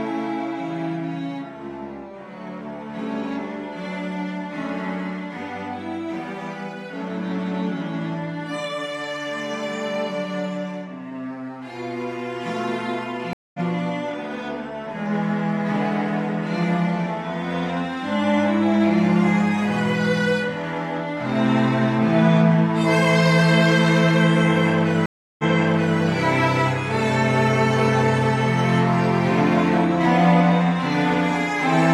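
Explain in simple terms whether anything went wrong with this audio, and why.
Stream reconnects at 13.33 to 13.60 s and 25.06 to 25.99 s: the connection dropped, the player went silent, then restarted decoding mid-stream. The first gap lasts 0.21 s and skips slightly ahead. The second lasts 0.33 s and jumps back 0.6 s, replaying audio.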